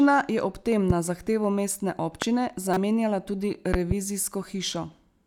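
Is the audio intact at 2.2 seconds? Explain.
No. A voltage spike, likely from a switch or static discharge, enters the chain at 2.22–2.25 s, causing a single loud pop about 20 dB above the speech, which continues underneath.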